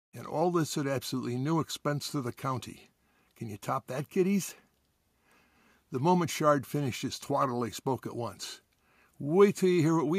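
No technical faults are audible.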